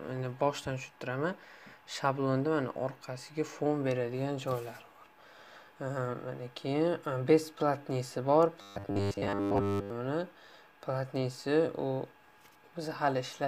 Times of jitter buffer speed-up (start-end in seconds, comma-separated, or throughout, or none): none